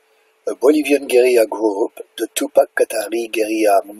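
Speech recording with nothing technically wrong in its signal at any point.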